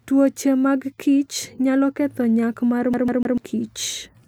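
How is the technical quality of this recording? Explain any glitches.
The recording has one clear glitch, a skipping-CD stutter late in the speech. From 2.93 to 3.38 s, right after "kichnyalo ketho nyak mar", a CD stuck on one turn repeats a 0.15 s slice three times, as the laser jumps back a track each rotation. It sounds like a rapid, even stammer. On a waveform or spectrogram, identical blocks repeat side by side, separated by brief silent gaps.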